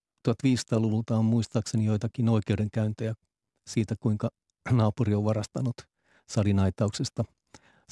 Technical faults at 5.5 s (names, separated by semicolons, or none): none